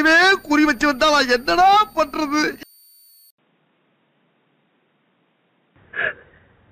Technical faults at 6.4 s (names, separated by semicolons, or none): switching supply whistle; input switched to a poorer device